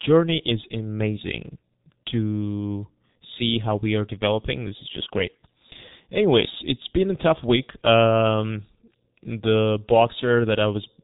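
From start to finish the speech has been through the G.723.1 codec, and it's pretty heavily damaged. Nothing gets through above 3.8 kHz, so the whole thing sounds muffled and boxy. The coarse, slow-updating voice model leaves a hoarse, gritty edge, and consonants smear into each other. That level of squashing fits a very low rate, around 6.3 kbit/s, where the codec sketches the voice roughly in 30 ms chunks.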